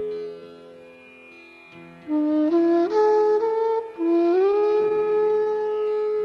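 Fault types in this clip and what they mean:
Repeated stalls (stutter): packets kept arriving late, so the jitter buffer ran dry and the receiver stretched the last sound. From 4.23 to 5.48 s it stalls 18 times, up to 36 ms each, 285 ms filled in total with nothing lost, so it drags and stutters.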